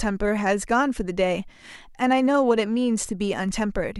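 Nothing in the speech stood out as a technical fault on listening.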